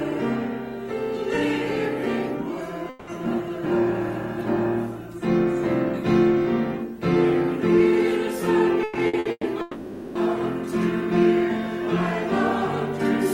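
The audio twice lost its incoming stream for a stretch, likely a long network dropout, from 2.89 to 3.10 s and again from 9.61 to 10.18 s. The receiver covered each hole by extending the last sound: about 180 ms of it in the first case and about 540 ms in the second. Neither fell to silence. Both are heard as a drawn-out, fading buzz or hiss standing in for the missing audio, which then resumes further on without the lost portion. Just before the second dropout, between 8.83 and 9.46 s, repeated packet loss produced a choppy, robotic passage. Four separate holes opened in quick succession, the longest about 120 ms. Each was patched by continuing the previous sound, so concealment covered about 360 ms, more than half of that span. The result is a choppy, stuttering texture with fragments of the original sound missing.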